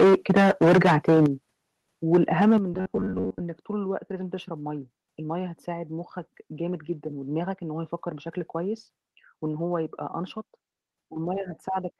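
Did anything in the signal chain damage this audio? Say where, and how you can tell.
Yes. From 0.0 to 1.26 s the loudest speech has a hard, crackling edge, about 13 dB past full scale with roughly a fifth of the samples flattened. From 2.13 to 2.57 s it happens again, milder at about 6 dB over and around 5% clipped. This is microphone overload, likely at the converter input where the tops of the peaks were sheared off. Flat tops and crackle only on peaks separate it from codec noise, which hisses across every level.

At 1.26 s and again at 2.58 s the microphone volume is stepped down: speech and background both drop by about 8 dB within a few milliseconds. Each step comes right after a clipped passage, which points to call processing that likely reacted to the overload by lowering the input volume. A network or codec fault would not move the room noise and speech together as one sudden, lasting change.

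From 2.74 to 3.41 s the speech turns into a rigid metallic buzz at 93.8 Hz, with most of that stretch made of repeated fragments. A period of about 10.7 ms fits short buffers of that length, likely replayed by the driver or buffer stage while fresh audio arrived too late. This is robotic sound from repeated short buffers. Its fixed pitch, which does not follow the voice, tells it apart from packet-loss concealment, which fades or smears instead.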